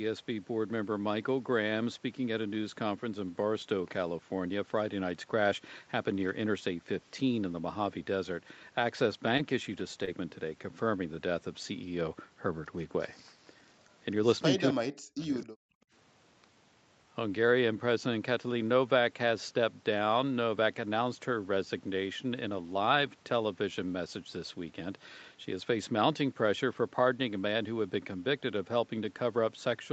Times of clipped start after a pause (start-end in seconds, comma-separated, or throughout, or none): none